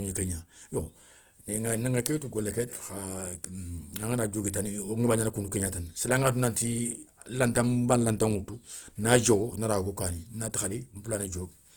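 A speech clip, likely squeezed through Opus compression in its music mode at a low rate that fits about 24 kbps, leaving the voice grainy, rough and noisy throughout while the full band reaches about 20.2 kHz.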